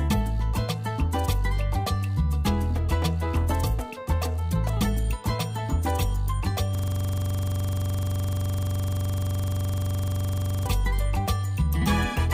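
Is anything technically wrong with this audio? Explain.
Yes. There is a system hang loop from 6.75 to 10.66 s. The computer or its audio driver stalled while the sound hardware kept replaying the same ring buffer, so one 42.7 ms slice of audio repeats exactly, over and over, for nearly four seconds. That loop length fits a 2048-sample buffer. At 23.4 repeats per second, the sound becomes a rough, rapid mechanical stutter bordering on a low buzz, with no forward movement until it ends.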